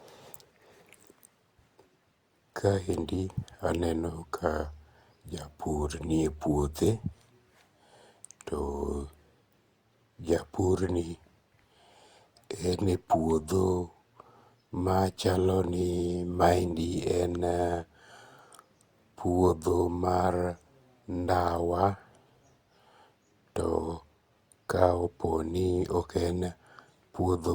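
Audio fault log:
Throughout: generation loss. The speech has a swirly, hollow quality, with consonant attacks smeared, well beyond what a single encode would leave. It likely went through Opus around four times, at a rate that points to roughly 64 kbit/s. Each pass requantises on a shifted frame grid, so the noise stacks up. The band still reaches about 20.2 kHz, so this isn't dullness.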